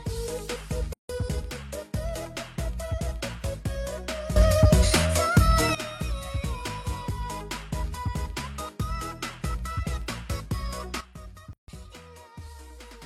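At 0.93 s the sound drops out for about 160 ms, to 1.09 s, then resumes where it stopped. This is a gap at a join of encoded pieces: separately encoded segments were spliced without trimming the encoder's start delay and end padding, leaving smeared edges.

At 4.36 s the level jumps up by about 12 dB, sound and background noise together, and stays raised until 5.75 s. From 11.01 s to the end it drops by about 13 dB. Both are sudden gain jumps, likely from a digital gain change applied instantly without a ramp.

Within that lowered stretch, a second gap at a join of encoded pieces opens at 11.53 s, a silence of about 150 ms ending at 11.68 s, with the same untrimmed splice and smeared edges.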